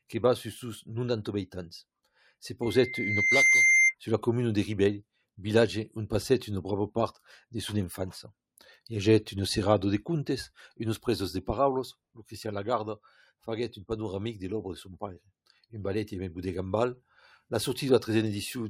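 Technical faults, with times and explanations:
2.62 to 3.95 s, loudspeaker feedback squeal: A single tone near 2.1 kHz swells over roughly the first 0.7 s, then holds about 5 dB above the surrounding sound until it stops at 3.95 s. A microphone was picking up the loudspeaker it was feeding. At this one frequency the loop's gain climbed above unity, so the tone fed on itself and kept growing. It builds into a squeal rather than appearing suddenly.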